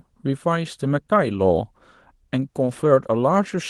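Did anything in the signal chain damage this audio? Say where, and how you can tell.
No, nothing in the chain damaged this speech; it went through a WebRTC call path whose Opus coding tops out around 12 kHz, and that band limit is normal for that stage.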